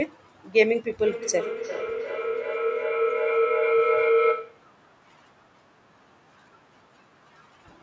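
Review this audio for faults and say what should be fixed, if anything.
Feedback howl runs from 1.06 to 4.75 s. Two devices in the same room closed a microphone-to-loudspeaker loop that gained on each pass, so the sound narrowed to a tone around 500 Hz, with the loop repeating roughly every 0.4 s and peaking at about the speech level. The call's normal microphone high-pass and 8 kHz band limit are also present. To prevent the howl, keep only one device in the room joined to the call's audio, or mute the extra device's microphone and speaker.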